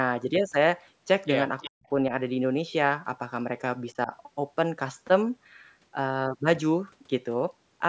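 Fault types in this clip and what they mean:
Echo leak: A short, faint delayed copy of the speech appears between 1.58 and 1.70 s, trailing the original by about 362 ms and sitting roughly 15 dB below it. This is likely a far-end loudspeaker whose echo canceller let part of the microphone pickup return. On a spectrogram it shows as a dim duplicate of the harmonic pattern shifted later in time. On the waveform it is a low ghost bump riding under the main signal.
Speech suppressed in double talk: The speech level collapses twice. From 1.65 to 1.89 s it drops by roughly 40 dB, close to silence, for about a fifth of a second. From 3.93 to 4.12 s there is a shallower dip of around 10 dB lasting about a tenth of a second. This is likely an echo canceller ducking the talker while both sides spoke at once. The waveform envelope pinches abruptly, and the spectrogram shows a vertical gap or faded band across frequencies.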